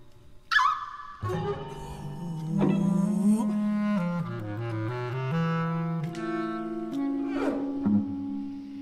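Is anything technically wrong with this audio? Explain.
No technical faults are present.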